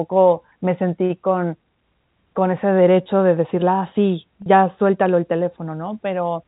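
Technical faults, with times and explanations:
4.42 to 4.46 s, packet loss with pitch repetition: 40 ms dropped out, which fits two 20 ms packets, so the receiver looped the last pitch cycle into a brief buzzy hold.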